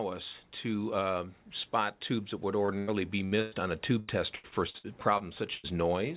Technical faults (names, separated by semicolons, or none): short concealed packet loss; burst of packet loss; repeated packet loss (robotic sound)